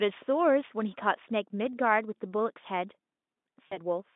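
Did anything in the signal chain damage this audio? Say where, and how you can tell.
Yes, at the network stage. Around 3.67 s the speech loses its edge and smears into a thin, buzzy extension that fades, then takes until about 3.78 s to firm up again. That's VoIP packet loss concealed by the speech codec: about 40 ms of audio went missing, which points to two lost 20 ms packets. The Speex decoder kept replaying its last pitch and filter at falling gain, and because each frame leans on the one before, the voice stays weak a bit past the gap.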